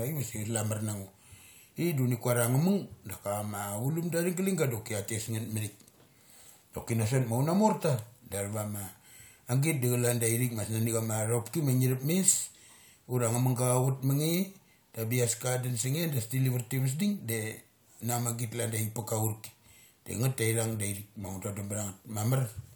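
No technical faults can be heard anywhere in this speech recording. There is nothing to place in time order, as no moment stands out from the surrounding audio.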